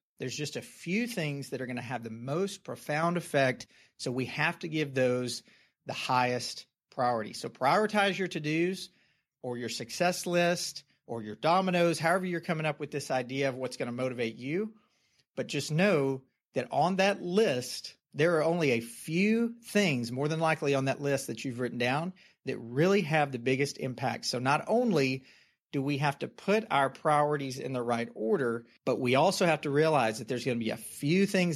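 At 3.03 s, just after "to have the most", the speech and the background noise jump up together by about 5 dB in a single step. This is a microphone volume stepped up: the call software judged the input too quiet and raised the device's gain at once.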